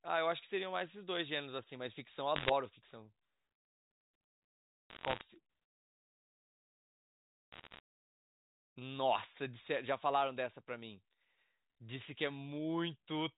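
Bit errors on the digital phone line flip single bits in the G.711 mu-law stream, corrupting individual samples into sharp ticks and crackle over the speech at 2.36–2.50 s, 4.90–5.22 s and 7.52–7.80 s, densest in the first burst.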